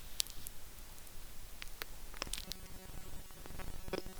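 From 2.44 s to the end of the clip at 4.19 s, the speech takes on robotic sound from repeated short buffers. It becomes a rigid, metallic buzz at 188 Hz that still loosely tracks the speech. That pitch matches a segment of about 5.3 ms being replayed over and over, likely because new audio is arriving too seldom. Most of the real signal, roughly 70%, is skipped. On a spectrogram, evenly spaced horizontal harmonic lines at multiples of 188 Hz replace the normal formant movement. The waveform shows one short cycle copied end to end.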